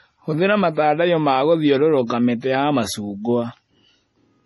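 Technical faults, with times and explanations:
Throughout, MP3 compression: the audio has nothing above 11.5 kHz and a heavy watery, swirling texture, likely from MP3 encoding at a low bitrate around 32 kbps, where the encoder cuts the treble and drops weak frequency lines that flicker between frames.
2.07 to 2.10 s, pre-echo: a short hiss lasting about 31 ms arrives just before a sharp attack, softening its onset. The codec spread quantisation noise across the whole block, so noise meant for the loud attack leaked into the quiet moment before it.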